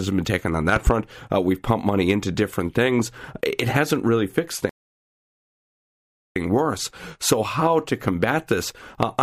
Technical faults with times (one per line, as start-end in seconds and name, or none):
0.76-0.91 loud pop
4.69-6.36 stream reconnect